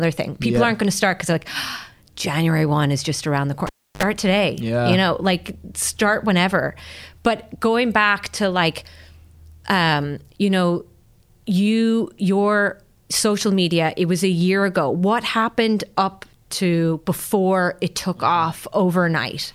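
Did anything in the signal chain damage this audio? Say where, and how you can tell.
Yes. A cable was pulled and plugged in, in the analogue wiring, just after "is just around the". At 3.67 s a pop marks the break, then about 312 ms of near silence, then a 56 ms burst of 50 Hz mains buzz as the plug tip touched before seating. A second pop at 4.03 s brings the signal back before "today yeah you know". A digital dropout would cut cleanly, with no pops and no hum.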